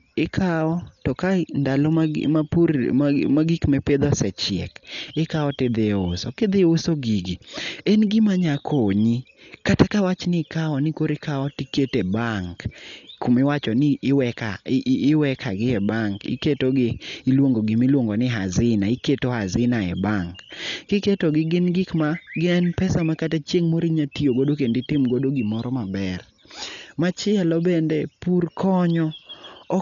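Throughout the speech, the sound is dull with a rough, fluttering grain around voiced tones, likely from heavy Dolby Digital compression at a rate that fits about 48 kbps. Starved frequency lines are filled with dither noise. A spectrogram shows a hard ceiling at 7 kHz and speckled noise between harmonics.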